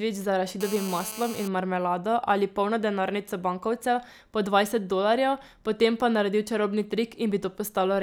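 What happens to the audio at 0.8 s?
A nearby 2G phone on a call, bursting 217 times a second, gets rectified by the audio circuit, giving GSM phone buzz from 0.61 to 1.48 s: a steady, raspy 217 Hz buzz about 13 dB below the speech.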